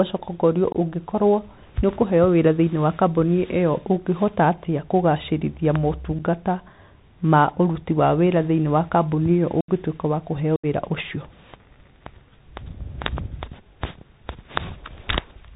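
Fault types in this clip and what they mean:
Bluetooth CVSD headset codec: The whole clip sounds muffled and narrow, with nothing above 4 kHz, scratchy s sounds and a granular hiss under the speech. This fits a 64 kbps CVSD link, whose one-bit up-or-down steps cannot follow fast high-frequency detail.
Unconcealed Bluetooth headset packet loss: Abrupt holes cut into the speech at 0.72 s (about 22 ms), 6.19 s (about 8 ms), 9.61 s and 10.56 s (75 ms each), with hard edges. Lost headset voice packets were replaced by silence or an idle pattern rather than concealed.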